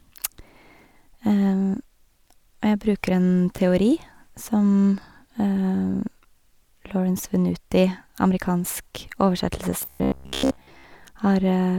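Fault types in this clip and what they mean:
Robotic sound from repeated short buffers: from 9.82 to 10.84 s the speech turns into a stiff metallic buzz at about 67 Hz, likely because fresh audio arrived too rarely and a 15 ms chunk kept looping, skipping most of the real signal.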